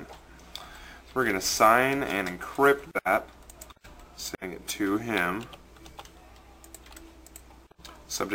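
Throughout, crude rate conversion repeats nearest samples, fitting a 32 to 44.1 kHz step; its inharmonic fizz, about 20 dB down, tracks loud, high sounds, unlike hiss.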